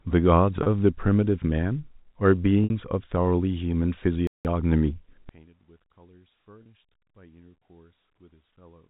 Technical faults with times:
0.63-0.66 packet loss with pitch repetition
2.64-2.70 packet loss with pitch repetition
4.27-4.45 playback stall
5.29-8.90 one channel inverted
6.63-6.66 packet loss with pitch repetition

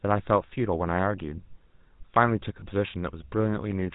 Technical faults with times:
0.00-3.95 GSM full-rate codec
2.60-2.63 lost GSM frames

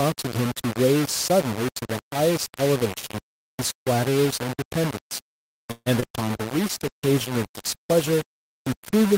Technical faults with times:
0.00-9.17 low bit depth without dither
5.71-5.88 call audio freeze
6.00-6.12 short concealed packet loss
6.19-9.17 call bitrate drop

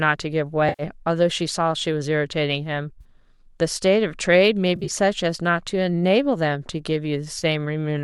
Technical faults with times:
0.69-0.83 AAC frame loss with concealment
3.00-3.04 AAC frame loss with concealment
4.75-4.90 AAC frame loss with concealment
7.38-7.44 AAC frame loss with concealment

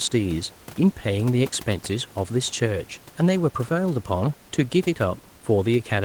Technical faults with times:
none

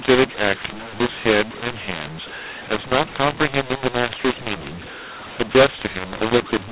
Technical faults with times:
0.00-6.71 mu-law and A-law mixed up

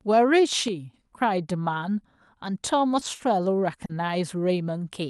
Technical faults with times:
0.68-0.94 sudden gain jump
2.45-2.47 lost packet rebuilt from error correction
2.79-3.21 lost packet rebuilt from error correction
2.99-3.21 short concealed packet loss
3.85-3.91 short concealed packet loss
3.89-3.91 lost packet rebuilt from error correction

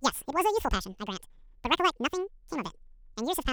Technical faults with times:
0.00-3.53 audio read two samples at a time (double speed)

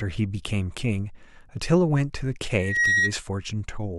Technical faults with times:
2.55-3.16 loudspeaker feedback squeal

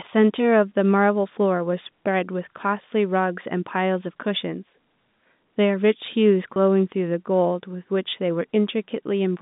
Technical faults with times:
6.54-6.56 packet loss with pitch repetition

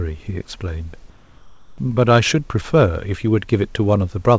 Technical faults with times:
1.10-1.78 comfort noise in place of the background

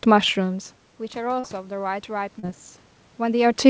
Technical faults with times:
1.40-1.46 short concealed packet loss
2.39-2.46 short concealed packet loss

